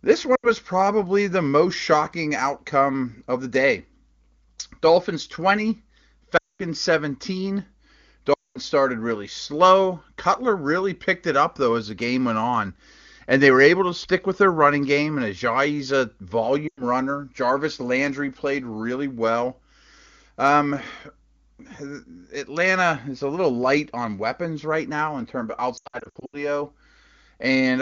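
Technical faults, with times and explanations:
0.35 to 26.43 s, lost AMR speech frames: There are five dropouts. They fall at 0.35 to 0.50 s, just before "probably the most shocking", at 6.37 to 6.63 s, and at 8.33 to 8.58 s, just before "started really slow". Two more fall at 16.67 to 16.83 s and at 25.77 to 26.43 s, just after "now in terms of". Radio errors corrupted speech frames, so the decoder reused the last good pitch and vocal tract settings at falling gain. The first dropout loses 80 ms of speech and the fourth 100 ms, which fits runs of four and five 20 ms frames. Each drops to near silence within two frames. The 220 ms losses also drop the sound to near silence within two frames. The last spreads short gaps of up to 80 ms over about half a second. After each one, speech returns weak or rough for a moment.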